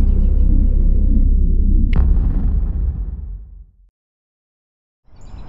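Nothing goes wrong anywhere in this one; there's no glitch or defect to point to at any moment of the audio.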